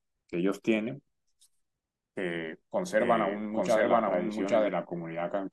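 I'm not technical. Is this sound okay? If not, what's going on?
No. From about 2.99 to 4.69 seconds there is a doubled audio track. The speech plays twice at once. A second copy trails the first by roughly 0.7 seconds and is about as loud, so the two overlap and blur together. The copy has no echo tail or room sound. It switches on and off suddenly. The likely cause is the same audio being recorded a second time through a slower route, or an editing mistake.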